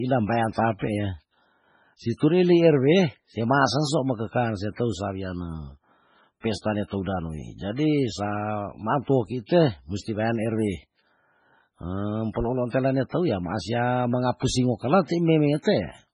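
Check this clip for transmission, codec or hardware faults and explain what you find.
Two codec faults are audible: heavy lossy-compression damage across the whole clip, and one pre-echo just after 12.3 s.

MP3 compression: Throughout the speech there is nothing above 10.4 kHz, and the sound is watery and swirly, with sibilants turning metallic and chirpy. The likely cause is an MP3 encoder starved of bits, at a rate that fits roughly 16 kbps. It has cut the treble at a fixed frequency and is zeroing weak frequency lines that flicker on and off between frames. Plain low-pass filtering would dull the top end without any swirl. This damage comes from weak frequency lines switching on and off between frames.

Pre-echo: From 12.33 to 12.36 s, a hiss runs for about 24 ms just ahead of the attack on "peloolan tela", and that onset sounds softened. The transform codec spread quantisation noise across the whole block, so noise scaled for the loud attack leaked into the quiet gap before it. 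A click or dropout would be abrupt. This is a short noise wash that comes before the attack, not after it.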